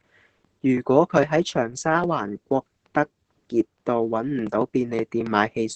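This speech clip carries Opus voice compression throughout, at a setting that sounds like about 10 kbps in SILK mode with the band held to wideband, so nothing above roughly 8 kHz survives. The coarsely coded excitation leaves the speech muffled, hoarse and faintly robotic from start to finish.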